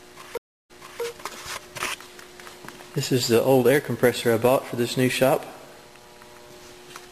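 At 0.37 s the sound cuts to silence for 0.32 s, then fades back in 0.33 s earlier, repeating what came just before the gap, through 1.02 s. This is a stream reconnect: the connection dropped, a fresh decoder started, and the server resent an earlier burst.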